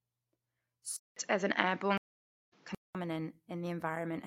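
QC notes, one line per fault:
0.96–2.95 s, input switched to a poorer device: a 200 ms gap, then duller, boxier speech with nothing above 7.3 kHz, a new noise floor about 35 dB down, and a roughly 5 dB level shift. Likely a narrower-band microphone taking over. On a spectrogram the upper band stops flat at 7.3 kHz, and the waveform shows a brief gap and a step in amplitude.
1.98–2.53 s, stream reconnect: 540 ms of dead silence, then the speech resumes roughly 0.4 s further on, skipping material, as a fresh decoder restarts and fades in. The waveform flatlines across the gap, and the spectrogram shows a blank vertical strip with a soft onset afterward.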